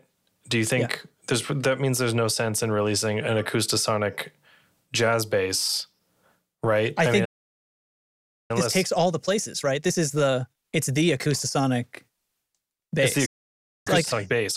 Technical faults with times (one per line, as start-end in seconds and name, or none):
7.24-8.51 playback stall
8.51-11.51 time-compressed catch-up
13.25-13.87 playback stall
13.87-14.57 time-compressed catch-up